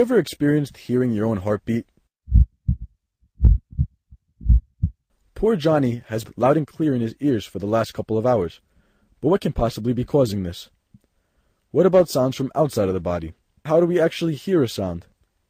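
At 6.23 s there is a skip ahead. About a second of audio never plays. The receiver dropped that stretch while later audio was already queued, so the timeline jumps forward. No fill is inserted. The sound before the jump runs straight into the sound after it. The join is abrupt but nearly gapless. The listener simply loses a piece of the sequence.

Right after the jump, from 6.34 s to 7.59 s, a jitter buffer speed-up follows. Playback runs at 109% speed. The buffer still held more audio than it aims for, so the receiver trimmed tiny pitch-period slices, roughly a tenth of a second in all. Pitch stays put. The sound just feels hurried. A second speed-up runs from 8.11 s to 9.96 s at 108%, removing somewhat more, around 150 ms. It carries the same rushed quality.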